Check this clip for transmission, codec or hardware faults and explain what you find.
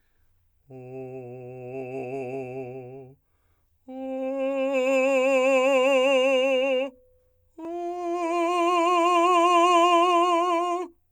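Nothing stood out on listening to this music.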